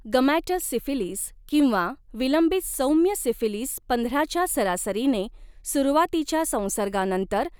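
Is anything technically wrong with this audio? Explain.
No, nothing technically wrong can be heard here.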